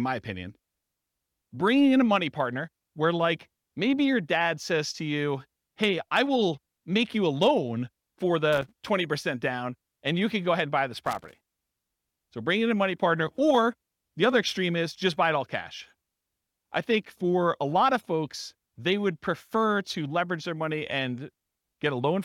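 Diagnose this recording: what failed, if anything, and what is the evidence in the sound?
A loose contact in the analogue wiring made and broke as the connector shifted, producing loose connector crackle in the speech. Irregular bursts of crackle and scratching appear from 8.53 to 8.72 s and from 10.94 to 11.47 s, where the signal was chopped intermittently.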